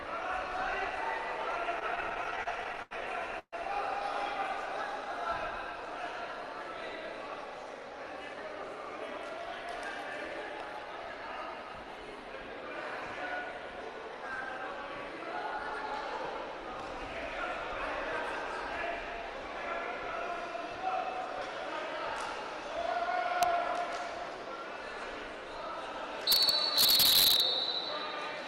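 From 1.79 to 2.93 s, repeated stalls (stutter): fourteen brief gaps, the longest 85 ms, are filled by stretching the last sound as the jitter buffer keeps running dry, so the audio drags and hiccups rather than dropping out.

At 3.39 to 3.54 s a single 135 ms hold fades to about 40 ms of silence before resuming where it stopped. This is a call audio freeze, likely from packets held up in transit, and unlike the stutter it is one longer pause.

Between 7.5 and 8.56 s a jitter buffer speed-up removes roughly 50 ms in small pitch-period slices, so the sound runs about 4% faster at unchanged pitch.

Integer overflow produces a sharp crack at 23.43 s and violent cracking from 26.32 to 27.40 s, where peaks pushed about 5 dB past the limit wrap to the opposite sign. This is far harsher than clipping's flattened tops.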